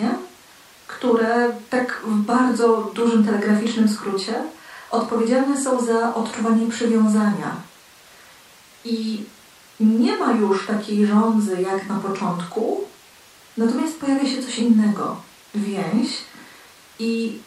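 No technical faults occur at any point in the recording, so there is nothing to describe in time order.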